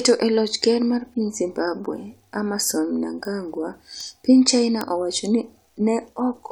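Speech, marked by four bit error spikes: at 1.4 s just after "loch ker mar piny", at 3.25 s, at 4.01 s, and at 4.81 s just before "wacho ni". Each is a single sharp tick unrelated to the voice, where a flipped bit makes the value leap by a power of two and snap back. On a waveform each is a needle only a sample or two wide, peaking around -17 dBFS, the last about -5 dBFS; a spectrogram shows thin full-band vertical lines.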